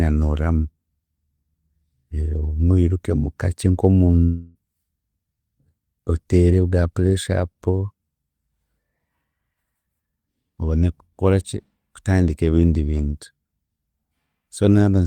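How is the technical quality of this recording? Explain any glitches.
The recording has one clear glitch, a long network dropout from 4.23 to 4.58 s. For about a third of a second the incoming speech likely stopped arriving, and the receiver filled the hole by extending the last sound it had. That filler covers almost the whole gap, so instead of dead silence you hear a fading buzzy smear before the speech resumes with roughly 0.32 s of it simply gone. A brief packet loss would leave a short click or stutter. A plain mute would leave true silence. Here the stretch is long, it is synthetic, and the speech that should be there is missing.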